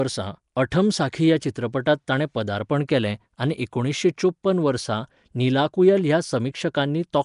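From start to finish the speech has a rough, hissy fringe around it and a smeared, underwater character, and nothing comes through above about 10.6 kHz. That's most likely Nellymoser compression, the old Flash microphone codec. It codes short blocks with a fixed, tight bit budget, so quieter bands get no real detail and are filled with noise instead. The damage here is plainly audible, and the character fits a bitrate somewhere around 44 kbps.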